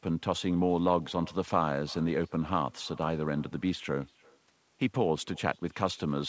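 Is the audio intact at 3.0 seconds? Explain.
No: echo with no canceller spans the whole clip; unremoved far-end loudspeaker pickup shadows the speech about a third of a second later, about 28 dB quieter.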